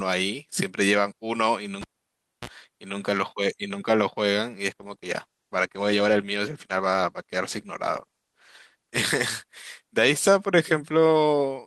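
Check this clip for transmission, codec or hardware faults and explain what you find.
Two faults are audible in this speech clip.

From 1.81 to 2.49 s there is a pop, then near silence for about 0.62 s, a brief 60 Hz mains buzz lasting about 37 ms, and a second pop as the speech returns. This is a cable pulled and plugged in: the live lead left its socket, and only its tip briefly touched on reinsertion, picking up hum before the connection was fully restored.

From 4.81 s to the end, the speech turns coarser and duller. This is a call bitrate drop: the encoder fell from 64 to 17 kbps, holding its lowest rate for 3.44 s. It quantised more roughly and trimmed high frequencies.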